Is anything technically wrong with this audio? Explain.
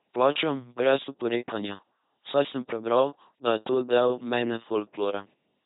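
Yes. The speech has passed through an LPC-10 vocoder, and the damage is heavy from start to finish. This codec discards the original waveform. It keeps only a short-term spectral envelope and a voiced-or-unvoiced decision for each frame. It then resynthesises with a buzzy pulse train or hiss. The result is a mechanical robot voice, with buzz or noise where voicing is misjudged. Nothing remains above 3.8 kHz, which fits a 2.4 kbit/s LPC-10 stream.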